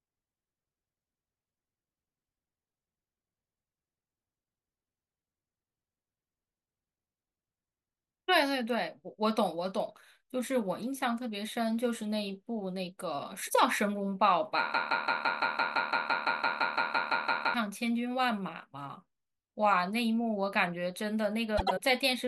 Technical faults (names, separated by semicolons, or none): broken-record loop; frames out of order